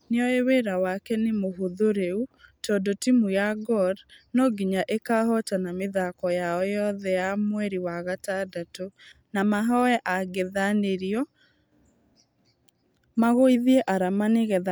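No technical faults can be heard anywhere in the speech. Nothing in the recording calls for a timestamp or a repair.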